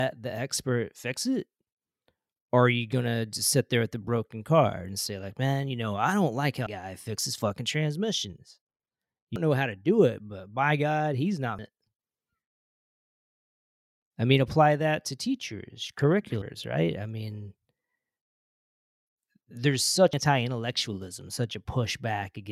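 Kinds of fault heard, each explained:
Damaged data in a compressed stream: corrupted bytes make the decoder misread frames and hunt for the next header, so this speech clip has five brief chirps or squawks at 6.67, 9.36, 11.59, 16.42 and 20.13 s, each a thin broadband vertical streak on a spectrogram and a waveform glitch.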